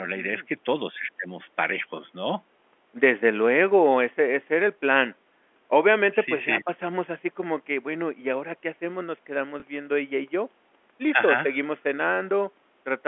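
At 9.6 s there is packet loss with the last packet repeated: a 20 ms gap, fitting one lost packet, is filled by replaying the preceding audio. It sounds like a small blip; the waveform shows a duplicated segment.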